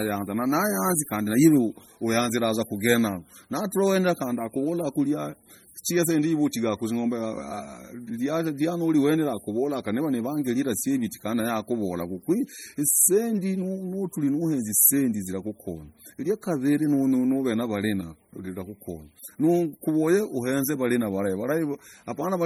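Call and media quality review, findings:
Watery, swirling texture across the whole clip, metallic chirping on s sounds, smeared onsets. Likely MP3 compression at a very low bitrate, around 32 kbps: weak frequency lines zeroed and flickering frame to frame. Band still reaches 20.7 kHz.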